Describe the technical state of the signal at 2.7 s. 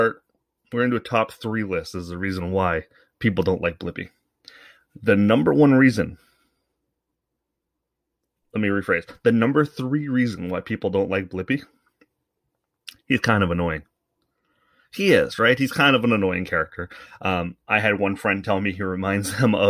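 Nothing is wrong with the signal at 2.7 s: the speech there is intact, with no dropout, clipping, glitch or other technical fault to be heard.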